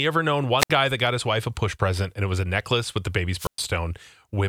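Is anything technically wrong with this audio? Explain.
Yes. There are two wireless microphone squelch dropouts. The first runs from 0.58 to 0.70 s, after "ever known" and before "guy that got his", with a mute of about 66 ms. The second runs from 3.36 to 3.60 s, after "necklace with the baby's", with a mute of about 114 ms. The FM radio link fades, and the receiver's squelch shuts the output. Each one sounds like a brief swell of hiss, a hole of near silence, then the speech returning.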